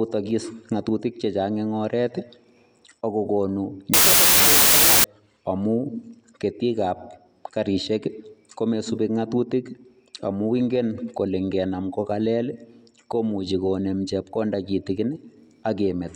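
From 3.94 to 5.04 s, loud noise buries the speech, heard faintly at 1.5 times speed: wrong sample width, fitting 16-bit samples read as 24-bit.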